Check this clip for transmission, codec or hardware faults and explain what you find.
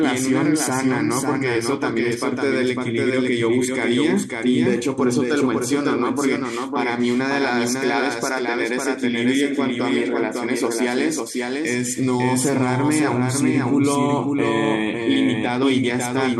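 The speech carries a doubled audio track throughout: a second copy is mixed in, likely from a slower capture path, trailing by about half a second and about 5 dB quieter, so every phrase repeats as a dry, uncoloured echo.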